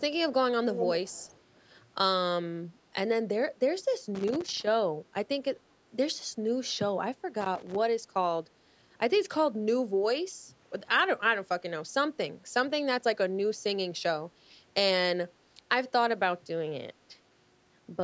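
From 0.73 to 1.41 s a delayed copy of the speech sits behind the direct signal, trailing it by about 226 ms and only a few decibels quieter. This is an echo leak. The likely cause is that the far end is playing the call over a loudspeaker, and its echo canceller failed to suppress what its microphone picked up. That residual was transmitted back, so the talker's own audio returns as a distinct repeat.

Two bursts of loose connector crackle follow, from 4.15 to 4.67 s and from 7.41 to 7.76 s. Each is an irregular run of scratchy clicks and pops lasting roughly half a second and a third of a second respectively. A worn or dirty contact is rapidly making and breaking as it shifts. This chops the signal, and any DC present on the line turns each make or break into a pop. The audio's bandwidth stops at 8 kHz, consistent with normal call microphone processing.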